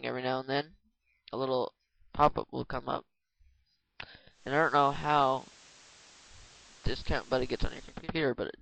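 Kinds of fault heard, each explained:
Digital radio blending to analogue: The receiver loses digital and cross-fades in 0.28 s to FM. Hiss appears about 25 dB below the signal.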